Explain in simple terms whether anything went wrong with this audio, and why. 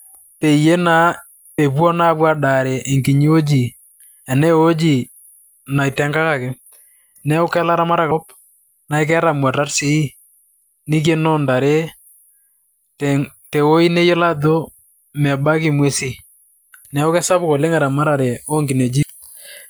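The speech has compressed frames skipped at 1.58 s, 8.11 s and 19.02–19.04 s. Chunks of about 32 ms each went unplayed, so the audio jumps ahead by about a fifth of a second, half a second, and about 0.15 s.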